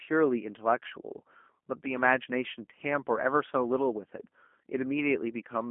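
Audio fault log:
throughout G.729 codec. The speech sounds slightly rough and synthetic for the whole clip, and the damage is plainly audible. The voice is rebuilt from a vocal tract filter, a pitch predictor and a few pulses per short frame, not carried as a waveform. That model loses fine detail. The sound sits in a telephone band of 200 Hz to 3.4 kHz, with nothing above 3.5 kHz. The thin, buzzy result fits an 8 kbit/s G.729A stream.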